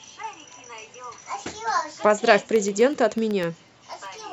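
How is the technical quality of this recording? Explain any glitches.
The recording has one clear glitch. From 2.43 to 4.18 s, periodic USB or driver dropouts leave a tick every 0.125 s, about fifteen in all. Something stalls the audio path on a fixed schedule, blanking a tiny sliver of each chunk of speech.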